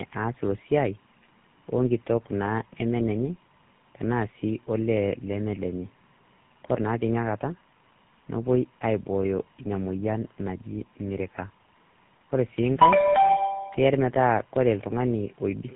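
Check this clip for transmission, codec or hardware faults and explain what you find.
One fault runs through the whole recording. Throughout, tandem speech coding: AMR-NB, then G.711, then GSM full rate each recoded the previous codec's errors. Speech sounds rough, muffled and warbly, and a spectrogram shows a hard ceiling at 3.8 kHz.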